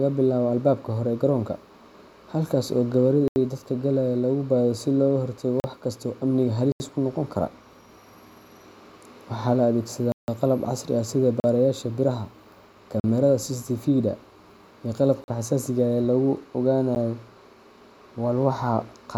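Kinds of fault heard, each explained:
Block of digital silence: the speech drops out abruptly eight times. Most are short holes of 40 to 160 ms, and one, near 16.95 s, is a tick. Runs of samples were replaced by zeros, cutting to silence and back without any fade.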